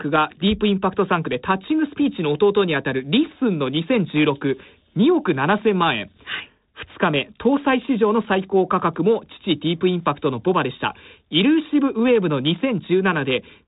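No faults are present; the speech runs over a G.726 ADPCM path at 32 kbit/s, whose band stops at about 3.8 kHz and which leaves only a light coding texture.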